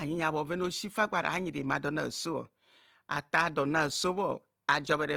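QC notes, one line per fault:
Throughout: Opus compression. The speech turns grainy and rough, with a fine noisy texture laid over voiced sounds where clean harmonics should be, and the damage is plainly audible. Bandwidth stays full, reaching up to about 20.4 kHz, with few spectral holes and little swirl. That pattern points to the likely cause: an Opus encoder in its music (CELT) mode at a rate around 24 kbps, filling starved bands with folded or noise-like content rather than leaving them empty.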